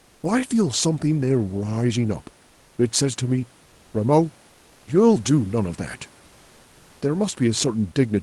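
At 3.63 to 3.91 s and again at 4.51 to 4.87 s, pauses of 280 and 360 ms have comfort noise in place of the background. The room noise, about 35 dB below the loudest speech, gives way to a flat, textureless hiss at nearly the same level, about 1 dB lower in the second gap. The likely cause is Opus discontinuous transmission, where the sender goes quiet and the receiver synthesises noise until speech resumes.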